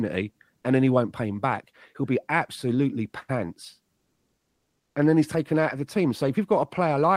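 A speech clip with comfort noise in place of the background from 3.99 s to 4.95 s, a gap of 960 ms between "be absolutely pants" and "and then he's taken". The background, already about 57 dB below the loud passages, turns into a flat, featureless hiss about 2 dB different in level. This is likely discontinuous transmission in an Opus DTX stream: the sender went silent during the pause and the receiver filled it with synthetic noise.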